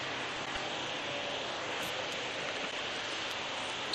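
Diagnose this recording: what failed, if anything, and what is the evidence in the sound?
Frames out of order, a network or transport fault: near 0.36 to 0.57 s and 2.64 to 2.80 s, adjacent blocks of about 96 ms and 72 ms play swapped, giving a garbled flutter. A spectrogram shows three abrupt vertical seams per event, with no lost time.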